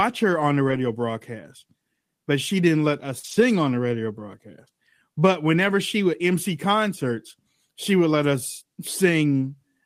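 Speech over a packet link loses data three times. First, lost packet rebuilt from error correction: at 0.67–0.77 s, after "her on the", and again at 3.23–3.37 s, before "on the radio broadcast", packets went missing and the decoder played the low-bitrate copies carried in the following packets. About 60 ms and then 80 ms of audio come out rougher and noisier. Second, short concealed packet loss: at 3.19–3.25 s, just after "she didn't let us", roughly 40 ms never arrived in time, and the receiver extended the preceding sound to bridge it, leaving a brief smear that runs straight into the rebuilt stretch.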